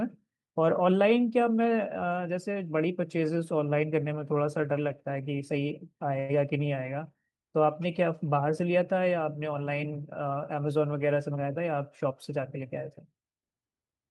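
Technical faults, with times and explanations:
6.19–6.32 s, short stall from a late packet: one sound hangs on too long, with a faint buzzy smear, then the speech resumes exactly where it stopped. A packet arrived late, the jitter buffer ran dry, and the receiver stretched the last sound for 96 ms, adding that much delay.
11.31–11.74 s, jitter buffer speed-up: the speech briefly sounds rushed, running at about 113% of normal speed while the pitch stays the same. The buffer had built up excess delay, so the receiver repeatedly cut short pitch-period pieces, about 70 ms in total.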